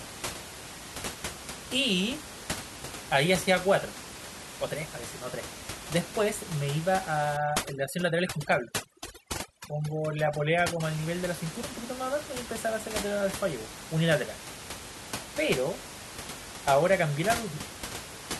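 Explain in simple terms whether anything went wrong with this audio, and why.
Between 7.37 and 10.83 seconds, a noise reduction tool was set too strong, a fault called overdone noise removal. It treats any sliver of sound close to the room's background noise as noise and silences it, and the softer parts of the speech get cut along with it. The background drops to an odd near-silence dotted with twinkling specks. The ordinary room noise heard elsewhere is simply part of the recording.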